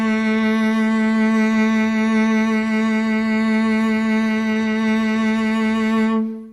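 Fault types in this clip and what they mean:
No faults can be heard anywhere in this music.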